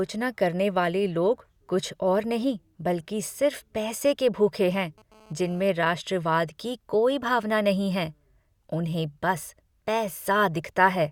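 GSM phone buzz, 4.74 to 5.69 s: the audio circuit rectifies a nearby phone's 217 Hz data bursts, adding a raspy, harmonic-rich buzz about 28 dB below the speech.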